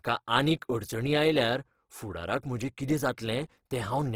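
Opus compression runs throughout the clip, plainly audible as grainy, rough speech with noisy texture in place of clean tone. It likely comes from starved bands refilled with folded or noise content, which fits the music mode at around 16 kbps. Content still reaches 20.2 kHz.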